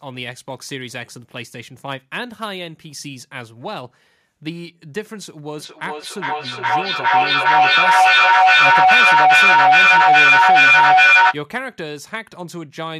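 From 5.59 s to 11.41 s there is feedback echo between two devices: a second device in the room plays back what the first microphone sent, that microphone captures it again, and neither echo canceller removes the other's output. Each stretch of speech returns at a fixed interval of roughly 400 ms, growing thinner and more ringing. The loop gains rather than decays, so repeats stack up until the build-up peaks at about 16 dB above the speech.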